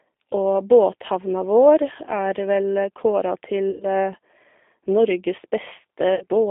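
Speech heard through a narrow telephone-style band of roughly 250 Hz to 3.6 kHz, with plainly audible damage from a G.729 codec throughout. The voice has the slightly rough, synthetic edge of a coder that rebuilds each short frame from a vocal tract filter, a pitch predictor and a handful of pulses, which fits an 8 kbit/s stream. Unlike generic band-limiting, where the sound is simply muffled, the roughness here sits inside the voice itself.

Twice the sound collapses into a stretched sound that fades. This is VoIP packet loss concealed by the speech codec. The decoder keeps repeating its last pitch and filter while lowering the gain, first from 3.71 to 3.86 s, covering about 90 ms of missing audio (consistent with three lost packets), then from 6.15 to 6.25 s, covering about 60 ms (consistent with two). A plain dropout would be silent or clicky. Here the gap is filled with a smeared, decaying sound, and the voice stays weak for a moment after each one because every frame builds on the one before.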